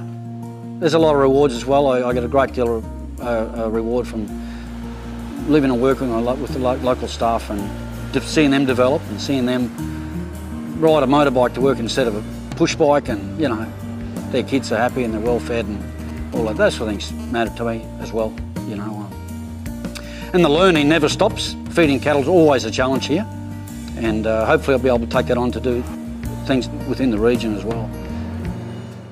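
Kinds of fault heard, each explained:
GSM signalling bursts: From 16.00 to 17.05 s, a galloping dit-dit-dit of short 217 Hz buzzes cuts in, roughly 20 dB below the sound. A nearby 2G phone is signalling in brief groups of radio bursts, which the audio circuit rectifies.
GSM phone buzz: From 17.19 to 18.17 s, a hard, raspy buzz at 217 Hz with many harmonics runs steadily, about 30 dB below the sound and unrelated to it. A 2G phone in a call transmits 217 bursts a second, and the audio circuit rectifies that pulsing.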